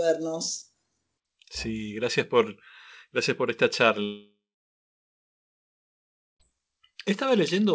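At 4.04 s the speech gives way to a brief buzzy continuation of the last sound that fades within a few tenths of a second, leaving about 2 s of silence until 6.43 s. When the speech returns, roughly 2.4 s of it is simply gone, with nothing time-stretched or repeated to bridge it. That is the signature of a long network dropout, likely a stall in packet delivery. A short packet loss would leave only a momentary warble; here concealment runs out and gives up. The surrounding G.722 call audio stops at 8 kHz.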